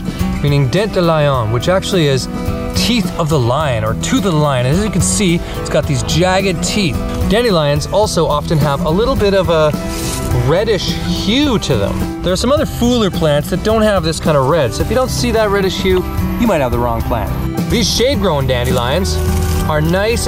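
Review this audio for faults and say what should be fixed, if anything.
Nothing here needs fixing; no faults were found.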